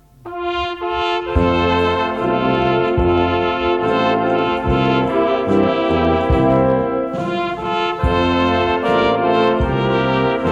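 Hard clipping breaks in four times: 2.55 to 3.21 s, 4.39 to 4.92 s, 5.51 to 6.72 s and 9.35 to 9.48 s. The peaks exceed what the stage can pass by about 1 to 2 dB, so their tops are sliced flat. At this mild overload it is heard as brief crackle on the loudest moments. Soft saturation would thicken the sound more smoothly. Here the flattening is abrupt, and the added high harmonics give a sharper edge.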